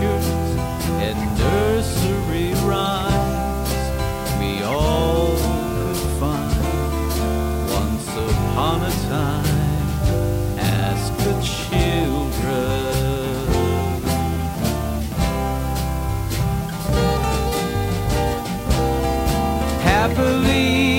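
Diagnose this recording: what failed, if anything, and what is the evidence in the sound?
A constant, even hiss sits roughly 20 dB under the sound for the whole clip, without distortion: low bit depth with dither at sample-format conversion, around 6 bits.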